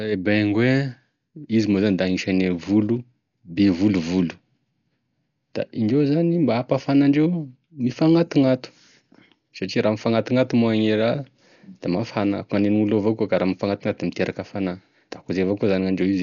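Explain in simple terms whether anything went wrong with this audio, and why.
Something did go wrong, and it lasts the whole 16 seconds. The speech sounds dull and muffled because nothing above about 6.9 kHz survives, and there is a rough, fluttering hiss clinging to the voice. The likely cause is heavy Dolby Digital compression. Squeezed too hard, that format cuts off the top of the sound and fills the parts it had no room to store with noise. A simple treble cut would only sound muffled, without that grainy flutter.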